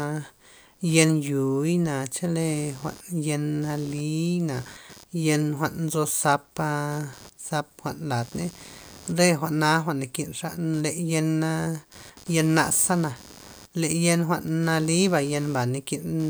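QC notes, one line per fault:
Throughout: computer activity noise. A buzz pulsing around 100 times a second sits about 25 dB below the speech, following computer load, not the talker, through a shared ground.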